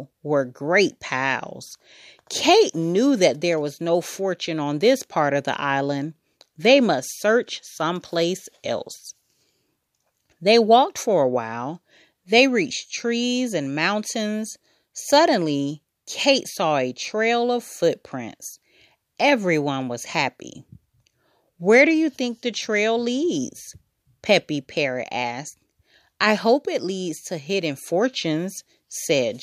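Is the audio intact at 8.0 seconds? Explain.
Yes, the speech at 8.0 seconds plays through intact, with no audible fault at that moment.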